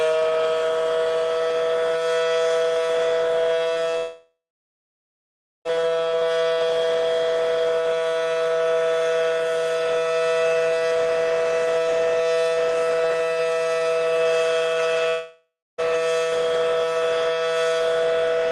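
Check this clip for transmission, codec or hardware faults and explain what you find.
Two kinds of transmission fault are present, both consistent with packets going missing on a network path.

Short concealed packet loss occurs at 3.73 s and 3.91 s, each about 20 ms lost. The decoder bridges each gap by extending the preceding sound and then crossfading back, leaving a brief smear or wobble. Unlike a dropout, the sound never actually stops.

Long network dropouts run from 3.97 to 5.67 s and from 15.09 to 15.80 s, likely from audio failing to arrive for an extended stretch. Each begins with a fading buzz or hiss of continued sound, then turns silent for roughly 1.3 s and 0.26 s respectively, before resuming with the gap's content missing.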